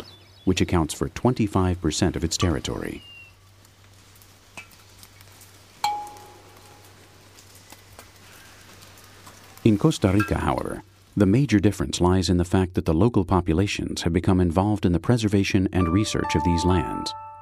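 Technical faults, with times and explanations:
Nothing stood out as a technical fault on listening.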